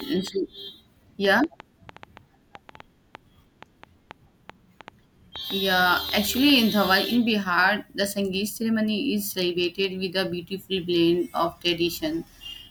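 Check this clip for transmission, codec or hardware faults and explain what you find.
One hardware-type fault is present: a train of clicks from the very start, 0.00 s, to 6.57 s. About thirty similar pulses arrive at roughly 4.1 per second but at uneven spacing, most likely interference from nearby equipment or a faulty connection or power supply injecting repeated spikes. They are heard as ticking over the speech and in its pauses, peaking around 5 dB above the speech. A waveform shows thin vertical spikes poking above the envelope, and a spectrogram shows matching full-height vertical lines.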